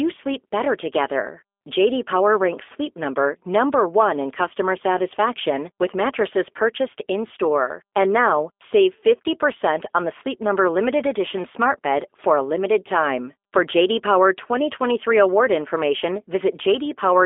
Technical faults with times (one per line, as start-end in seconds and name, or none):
0.00-17.25 G.729 codec